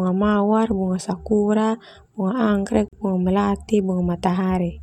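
At 2.88 s the speech breaks off for about 44 ms and resumes at 2.93 s. This is a gap at a join of encoded pieces: two separately encoded segments were butted together untrimmed, so the encoder's start-up delay and last-frame padding remain as silence. The edges are smeared by the codec, and the speech carries on exactly where it stopped. Nothing is lost or repeated, unlike a dropout or concealed packet loss.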